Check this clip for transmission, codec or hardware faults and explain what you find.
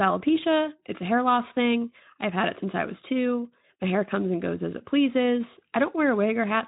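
Nothing in this recording points to a fault.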